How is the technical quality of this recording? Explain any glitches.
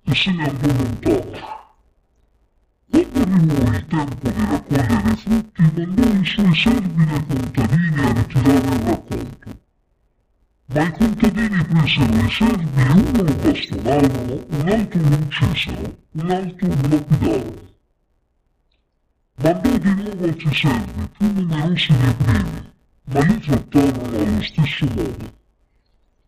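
The technical quality is poor: one fault runs through the whole recording. Interleaved audio is being read as planar throughout. Each block of roughly 5.8 ms, which fits a 256-sample block, has its alternating left-right samples split into halves, so each channel plays two interleaved streams at half speed. The blocks are too short for an octave drop, so the sound comes out dull and robotic, with a steady buzz at about 172 Hz. On a spectrogram this shows as smeared upper content and a horizontal line at 172 Hz with harmonics. The waveform shows periodic discontinuities every 5.8 ms.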